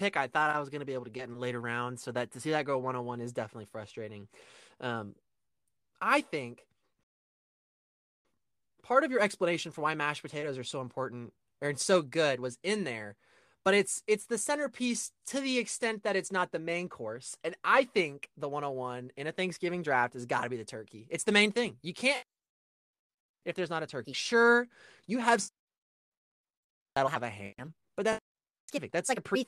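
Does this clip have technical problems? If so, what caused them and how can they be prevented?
No, there are no technical problems in this recording.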